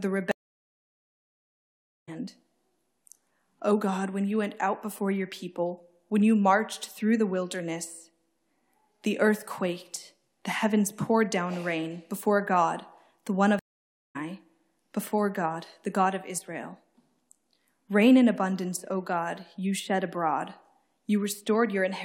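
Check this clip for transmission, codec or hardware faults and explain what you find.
Two stream reconnects occur. From 0.31 to 2.09 s the sound goes silent for about 1.8 s. From 13.59 to 14.17 s it goes silent for about 0.56 s. Each time the connection broke, the player went quiet, then rejoined the stream with a fresh decoder. Playback resumes roughly one and a half seconds further on in the first case and roughly 0.4 s further on in the second. That skip distinguishes it from a plain dropout, where the material would simply continue from the gap.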